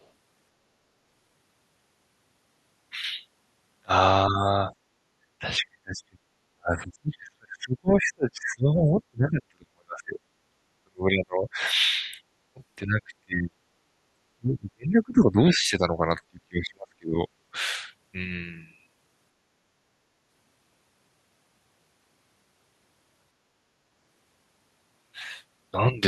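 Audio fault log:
0.02–0.07 s, other side's voice leaking through: a very faint trace of a second voice, far below the talker, likely echo the canceller left in the microphone signal.
4.30–4.37 s, 5.39–6.19 s, 6.52–11.6 s, 12.54–13.6 s, 14.35–17.17 s, speech suppressed in double talk: the talker dips slightly at first, then drops toward near silence for long stretches, likely because the echo canceller muted both overlapping voices.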